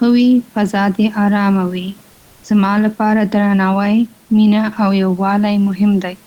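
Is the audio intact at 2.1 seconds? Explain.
No: from 2.11 to 2.43 s, comfort noise replaces the background, likely Opus DTX, showing as a smooth, featureless noise band at unchanged level, without the room noise's texture.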